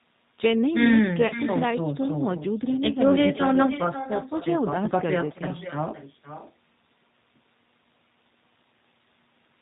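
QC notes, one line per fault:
Throughout: echo with no canceller. A quieter, thinner copy trails the speech by about half a second, at about 12 dB down. The far end's loudspeaker feeds its microphone, and nothing removes the sound.
Throughout: G.729 codec. The speech sounds rough and slightly synthetic, with nothing above 4 kHz. The 8 kbit/s coder rebuilds each frame from a vocal tract filter and a few pulses.
1.27–1.33 s: VoIP packet loss concealed by the speech codec. About 30 ms of speech, which fits a single lost packet, is stretched into a fading buzzy tone or coloured noise. The decoder extrapolates its last pitch and filter, then recovers gradually.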